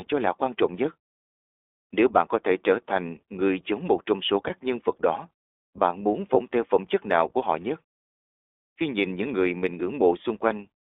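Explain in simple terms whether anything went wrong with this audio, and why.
iLBC codec, throughout the whole clip: the speech was squeezed by a phone-call codec that handles sound in 20 ms slices and keeps only roughly 250 Hz to 3.6 kHz. That cuts the bright top and deep bottom, leaving speech thin, slightly rough and synthetic-sounding.

Lost iLBC frames, at 4.48 to 4.51 s, between "giống một trong số" and "nhân vật đó bạn", and at 6.34 to 6.37 s, between "vật đó bạn muốn" and "theo phẩm chất nào": one 20 ms slice went missing each time. The decoder filled the gap by repeating the last bit of speech with added noise, giving a brief buzzy smear before the sound snaps back.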